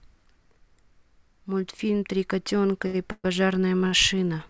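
At 2.87 and 3.87 s, a short stall from a late packet holds the sound for about 70 ms and 49 ms. On a spectrogram this shows as flat, smeared bands. From 3.12 to 3.27 s, a call audio freeze, likely from delayed packets, stretches the sound into a fading buzz with a 30 ms silent gap. The waveform shows a decaying tail before resuming. The spectrogram shows nothing above 8 kHz, which fits a wideband call codec.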